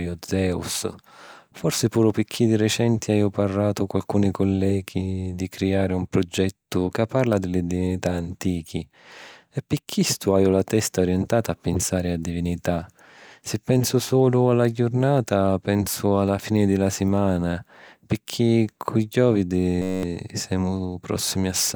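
From 19.82 to 20.03 s, a system hang loop replaces the speech. The driver froze while the hardware kept replaying one 10.67 ms slice, which fits a 512-sample buffer. Twenty exact repeats make a steady 93.8 Hz buzz. Roughly a fifth of a second is lost.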